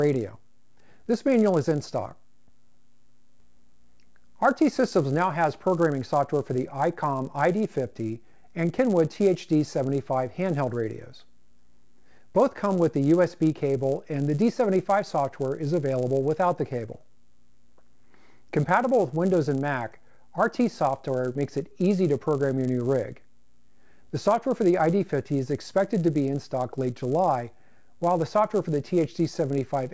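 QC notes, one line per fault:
Throughout, resampler restarted on every block: the 48 kHz to 16 kHz conversion runs on 10 ms blocks in isolation, so each block edge lacks true neighbouring samples and carries a small error, heard as a 100 Hz buzz that appears only while sound is present.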